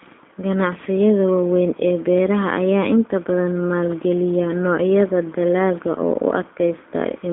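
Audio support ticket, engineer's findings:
G.729 codec damage throughout, plainly audible: rough, synthetic speech. Band about 200 Hz to 3.7 kHz, nothing above 3.8 kHz; spectrogram shows a hard ceiling and smeared harmonics. Narrowband CELP path rebuilding speech from filter, pitch and sparse pulses, consistent with 8 kbit/s G.729A.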